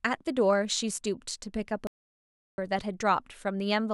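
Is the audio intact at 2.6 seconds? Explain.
No. At 2.6 s the speech has only just resumed after a playback stall from 1.87 to 2.58 s, about 0.71 s of dead silence, likely from the player running out of data. The waveform shows a flat gap; the spectrogram shows a blank vertical band.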